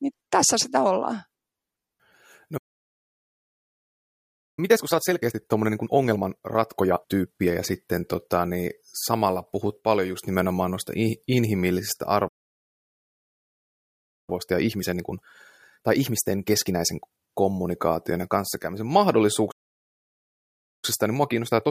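Playback stall, 2.57 to 4.59 s: the speech stops mid-flow and the output falls silent for 2.0 s, most likely because the player ran out of buffered data or its playback thread was blocked. It resumes where it stopped. The same happens at 12.28 to 14.30 s, again 2.0 s, right after "just nimenomaan noista inhimillisistä", and at 19.51 to 20.85 s for about 1.3 s.

Time-compressed catch-up follows each stall. The player works off its backlog by cutting out small slices and cross-fading the remainder, so the speech is hurried while its pitch stays normal. From 4.59 to 7.59 s it runs at 1.5 times normal speed. From 14.30 to 17.30 s it runs at 1.25 times, starting with "kommunikaation ja kanssakäymisen". From 20.85 s to the end it runs at 1.15 times, starting with "paljon että minkälaisia arvoja".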